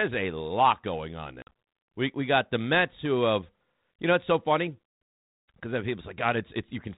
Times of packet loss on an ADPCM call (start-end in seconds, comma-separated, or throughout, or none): 1.42-1.52